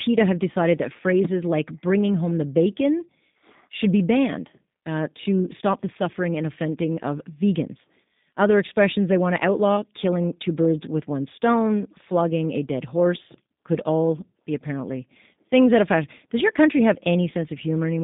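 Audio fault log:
throughout, G.729 codec: the speech is confined to a telephone band of about 150 Hz to 3.7 kHz and has a plainly audible rough, slightly synthetic, buzzy grain. Each 10 ms frame is rebuilt from a vocal tract filter, a pitch predictor and a few pulses rather than from the waveform itself, which fits an 8 kbit/s G.729A coder. A simple band-limited line would sound dull but smooth; this grain comes from the sparse pulse excitation.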